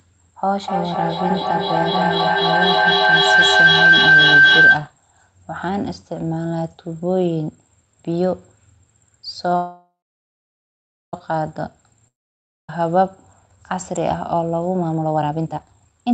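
A speech clip carried over a call with four kinds of fault. From 0.58 to 4.92 s two devices sharing a room formed a loop that gained level on each pass, producing a feedback howl near 1.5 kHz that climbs to about 9 dB above the speech and pulses roughly every third of a second. Between 9.56 and 11.14 s packets were most likely held up in transit, so the jitter buffer ran dry. This call audio freeze stretches the last sound into a fading buzz or hiss, then about 1.19 s of silence, before the audio resumes exactly where it stopped, nothing lost but 1.57 s of delay added. At 12.08 to 12.69 s a long network dropout, likely from packets that never arrived, leaves a brief decaying fill and then about 0.58 s of silence, and about 0.63 s of the speech never returns. Finally the jitter buffer, holding more audio than its target, triggered a jitter buffer speed-up by cutting short pitch-period slices. 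From 13.47 to 13.84 s it drops about 50 ms for a slight 110% rush, and from 14.72 s to the end it removes about 0.7 s, running at 155% with unchanged pitch, audibly hurried.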